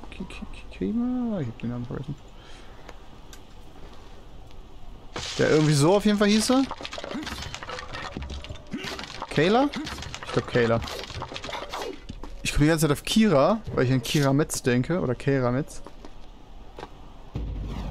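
No technical faults can be heard in this audio, and the signal stays steady and intact throughout.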